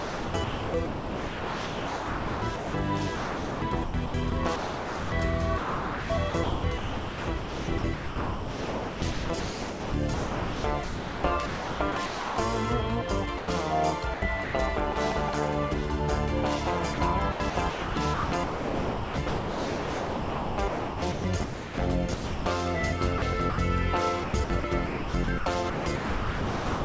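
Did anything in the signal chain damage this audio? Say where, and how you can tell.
Yes. The sound is chopped by the voice detector, a call-processing fault, at 0 to 12.38 s, 14.14 to 14.54 s, 16.94 to 22.46 s, 23.18 to 23.58 s and 24.24 s to the end. The sender's detector likely switched transmission on and off, so stretches flicker against synthetic comfort noise. A spectrogram shows textured sound alternating with flat, featureless noise blocks.

Sound is dropped by the voice detector at 13.38 s, where 100 ms of sound gives way to steady noise before returning. The waveform shows a short, even-envelope patch without transients. The detector likely mistook quiet sound for background and stopped sending while comfort noise filled in.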